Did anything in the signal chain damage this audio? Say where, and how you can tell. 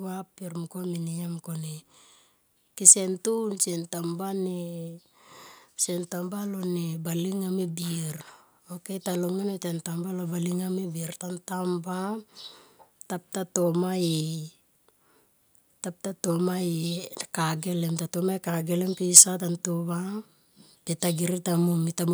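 Yes, microphone overload at the converter input, twice: 2.87 to 2.90 s, and 19.16 to 19.21 s between "ka gelem" and "ta nto va". Peaks run about 4 and 5 dB over full scale with flattened tops, giving a harsh crackle. Likely input gain set too hot.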